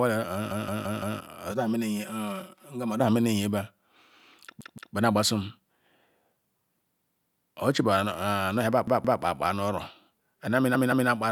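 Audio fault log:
0.51–1.20 s, 4.61–4.95 s, 7.00–7.51 s, 8.88–9.22 s, 10.75–11.09 s: repeated buffer. A roughly 171 ms chunk, which fits an 8192-sample buffer, replays two to four extra times with hard joins, so the speech stutters.
1.52–3.00 s: channel delay (comb filtering). One channel lags by about 5 ms. Summed to mono, this cuts evenly spaced notches from around 100 Hz, making the speech hollow and phasey.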